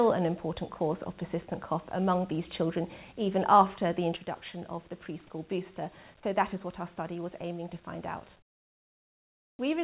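The audio comes through a call path with nothing above 4 kHz, which fits G.711 mu-law coding. At 4.17 s the level falls abruptly by about 6 dB and stays down to the end, likely because one channel drops out of a stereo pair that carried the same sound. From 8.39 to 9.59 s the background gives way to smoother noise about 14 dB quieter, likely comfort noise in place of the background while the sender paused transmission. At 9.56 s the returning sound starts abruptly, missing about 30 ms of its soft beginning, likely an onset clipped by the voice detector.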